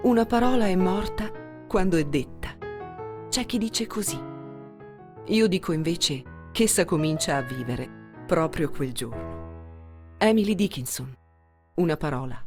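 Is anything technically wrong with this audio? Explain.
No, nothing technically wrong stands out here; the audio comes through without any faults to point to.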